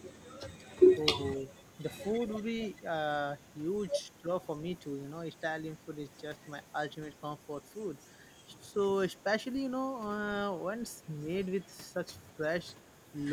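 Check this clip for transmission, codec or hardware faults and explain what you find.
Two kinds of fault appear: brief dips in the speech level and faint delayed echoes, both pointing to echo cancellation in a call.

Speech suppressed in double talk occurs from 1.13 to 1.22 s and from 4.21 to 4.30 s. Each lasts about a tenth of a second, with the level dropping by roughly 15 dB in the first and roughly 10 dB in the second. The likely cause is an echo canceller that, with both sides talking, could not separate the talker from loudspeaker echo and turned the signal down.

Echo leak appears from 1.35 to 1.62 s and from 2.26 to 2.43 s. A faint copy of the speech arrives 262 ms behind the original, at about 30 dB below it. This likely comes from a loudspeaker whose echo canceller let part of the microphone pickup through and sent it back. The fixed 262 ms delay, matching in both stretches, distinguishes it from room reverberation, which would blur the sound continuously rather than repeat it as a distinct, delayed copy.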